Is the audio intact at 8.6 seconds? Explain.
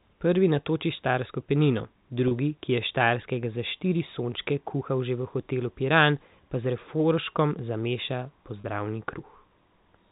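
No, there's a brief dropout from 8.61 to 8.64 s, about 30 ms, consistent with a single lost packet. It shows as packet loss with pitch repetition: the receiver loops the last pitch period to fill the hole, so you hear a slightly held, buzzy note.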